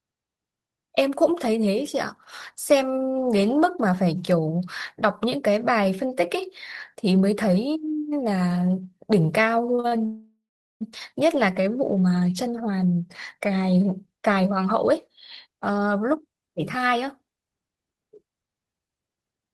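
A speech clip with a rough patch around ten seconds. First there are three short stalls from a late packet at 9.75, 9.80 and 9.88 s. Each holds the sound on for about 29, 33 and 38 ms while the jitter buffer sits empty, then carries on from the same spot, so you hear a brief stretch with a slight buzz or dip rather than anything lost. Right after that comes a call audio freeze from 10.05 to 10.83 s. The last sound trails off as a fading buzz or hiss and then goes silent for about 410 ms, adding roughly 0.75 s of gap before the speech resumes where it left off. The likely cause is packets held up in transit and the buffer running dry. From 13.97 s to the end, around 19.53 s, there's a jitter buffer speed-up. The receiver trims tiny pitch-period slices again and again to work off the backlog, so the speech plays about 10% fast at the same pitch and sounds a bit hurried, losing around half a second overall.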